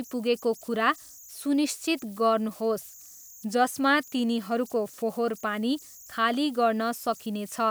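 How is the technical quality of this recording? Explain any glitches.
A high whistle runs through the whole recording, around 7 kHz, sitting about 25 dB below the speech and turning grainy under quieter passages. These are converter idle tones: an undithered delta-sigma converter, fed small input, settles into repeating bit patterns whose pitch follows the input's offset.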